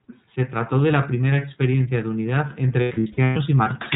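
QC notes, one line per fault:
Throughout: iLBC codec. The speech is confined below 4 kHz and carries a plainly audible rough, synthetic edge, which fits 30 ms frames at a 13.33 kbps rate. Because each frame's excitation is coded independently, the roughness stays even rather than smearing across frames.
2.82 to 3.37 s: lost iLBC frames. About 360 ms of frames go missing, scattered over 540 ms with runs up to roughly 100 ms. Each gap is bridged by a repeated pitch cycle mixed with noise, heard as a held, buzzy vowel. Clean speech returns almost immediately after each gap, unlike codecs whose recovery smears on.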